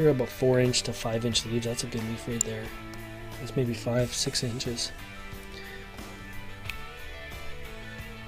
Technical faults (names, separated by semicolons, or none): electrical switching spike